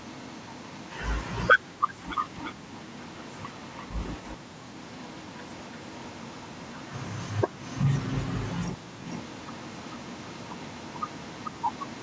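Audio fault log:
0–1.45 s, 2.15–4.37 s, 4.76–7.86 s, 8.99–12.03 s: echo leak. A second copy of the speech trails each stretch by about 440 ms (about 340 ms in the second one), roughly 10–15 dB down. Likely a speakerphone whose echo canceller let some of its playback through.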